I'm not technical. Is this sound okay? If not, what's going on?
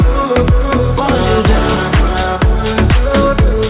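Yes, nothing is wrong here.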